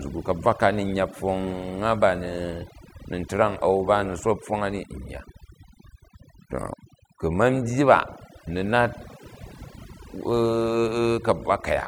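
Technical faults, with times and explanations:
Throughout: overdone noise removal. Aggressive denoising mutes frequency bands near the noise floor, leaving twinkling residue and a spectrogram of isolated speckles over blank background.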